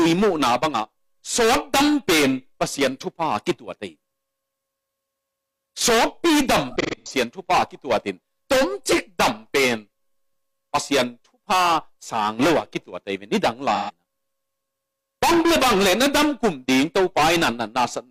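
AAC frame loss with concealment hits at 6.71–7.12 s, where scattered gaps totalling 256 ms (longest about 150 ms) are patched from the last good spectrum, sounding smeared and phasey. It recurs at 13.75–13.91 s, a 128 ms patch. Spectrograms show blurred, frozen bands.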